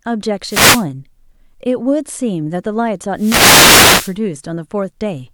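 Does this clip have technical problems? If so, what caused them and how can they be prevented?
Yes. Wireless microphone noise hits occur from 0.45 to 0.86 s and from 3.15 to 4.17 s, each a short swish or burst of static over the speech. On an analogue FM radio link, reflected copies of the signal arrive out of phase and cancel at the receiver antenna, so the carrier weakens and the receiver's own noise rises into the audio until the signal recovers. Preventing this calls for diversity receivers, clear line of sight, and antennas placed close to the talker.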